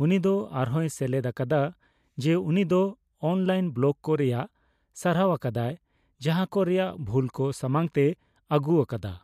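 No audible technical faults.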